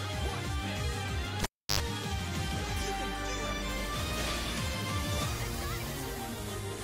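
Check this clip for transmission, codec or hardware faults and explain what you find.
One hardware fault is present. From 1.43 to 1.80 s, a cable pulled and plugged in: a pop, 0.32 s of near silence, then 0.08 s of 50 Hz mains buzz as the bare tip makes contact, and another pop when the sound returns.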